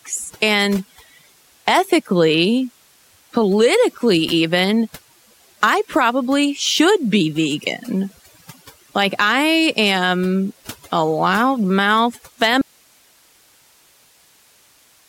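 From the start, the speech carries overdone noise removal. The noise reducer was set too hard, so frequency bands near its noise estimate are pulled far down, and quiet parts of the voice go with them. The background sits near silence, dotted with twinkling specks. This lasts the whole clip.

At 12.62 s the sound cuts out abruptly and stays out to the end. This is an audio dropout to a faint residue. The signal was likely lost while the path after the break stayed live. What remains is hiss only, roughly 35 dB below the speech. It is a sudden drop, not a pause or a fade.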